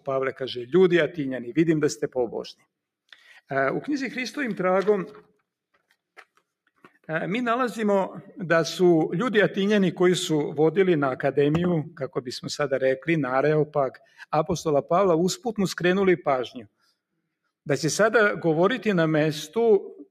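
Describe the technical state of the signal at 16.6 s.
At 16.56 to 16.9 s the signal shows sound cut by the noise suppressor. For roughly a third of a second the suppressor judged this passage to be noise and pulled it down much harder than its surroundings, with the deepest drop reaching about 21 dB. Sustained or decaying parts of the sound sink away or have their tails clipped short, leaving a brief hollow gap while any sharp onsets still come through.

This moment sits inside a wider fault, a noise suppressor applied to music or sounds, running the whole clip. A speech-oriented suppressor keeps treating steady tones, ambience and reverberant tails as noise, so the level swings by something like 5 dB as it clamps and releases. The result is an ongoing pumping, fluttering thinness that the deeper cut at 16.6 s exaggerates.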